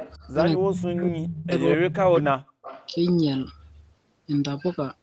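From 0.0 to 0.17 s there is an echo leak, likely from a far-end echo canceller that failed to remove what its microphone picked up from the loudspeaker and sent it back. It is heard as a faint copy of the speech trailing about 250 ms behind, roughly 15 dB below the direct sound. The same leak returns from 2.62 to 2.91 s, with the same delay and level, as a short ghostly repeat.

Between those, the speech is suppressed in double talk twice, from 0.57 to 1.54 s and from 1.76 to 2.51 s. The likely cause is an echo canceller that could not tell the talker from loudspeaker echo while both sides spoke, so it turned everything down. The speech drops sharply, by around 35 dB in the first stretch and around 40 dB in the second, and is affected for nearly a second and then about 0.7 s, within the call's 8 kHz band.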